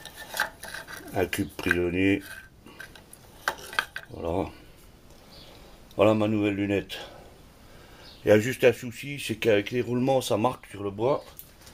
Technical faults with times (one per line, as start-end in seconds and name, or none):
1.80-1.85 short stall from a late packet
7.34-7.78 jitter buffer speed-up